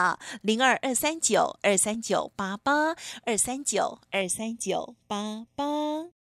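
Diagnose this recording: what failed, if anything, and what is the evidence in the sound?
Channel delay (comb filtering) sets in at 4.22 s and runs to the end of the clip, at the driver or buffer stage. From that point the speech turns hollow and phasey. One channel lags the other by a fraction of a millisecond, so summing to mono cancels the shared signal at evenly spaced frequencies, the first around 1.5 kHz. On a spectrogram, fixed dark horizontal notch bands appear from 4.22 s onward.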